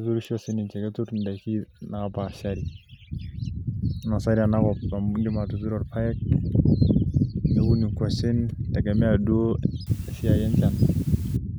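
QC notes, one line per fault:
9.87–11.37 s, low bit depth with dither: a steady, even hiss appears under the speech for this last stretch and stops cleanly. The speech itself stays clean and undistorted. The audio here is reduced to 7 bits. Dither is added before rounding, so the coarse rounding error does not track the signal. It spreads into flat white noise instead. That noise sits roughly 25 dB below the speech.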